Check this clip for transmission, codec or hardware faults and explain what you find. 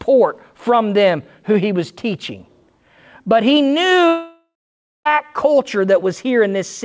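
One fault turns up, a break in transmission. The call path's lack of content above 8 kHz fits a wideband call codec such as G.722.

From 4.08 to 5.07 s, the last sound carries on as a fading buzz or hiss, then about 0.53 s of silence. Speech resumes with roughly a second missing, likely a long network dropout.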